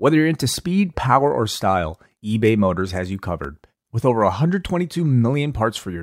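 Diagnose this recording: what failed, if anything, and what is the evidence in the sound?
The fault lies at the playback stage, in reading the disc: these are CD scratch ticks. A blemish on the disc corrupts more data than error correction can recover, once per revolution, so the player patches the damaged samples by interpolating or muting them. Between 2.87 s and 4.21 s in this speech clip, eight short ticks occur at a steady rate of roughly six per second. Each is a tiny gap or click lasting only a few milliseconds.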